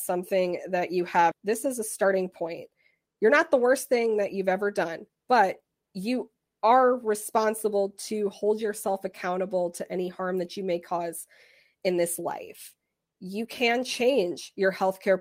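At 1.31 to 1.33 s there is a skip ahead. Around 0.7 s of speech is dropped, and playback joins the two sides almost directly, with no gap.

From 1.40 to 5.83 s comes a jitter buffer speed-up. Short pitch-period pieces are cut repeatedly, about 0.3 s in total. Speech runs at 108% speed, same pitch, sounding hurried.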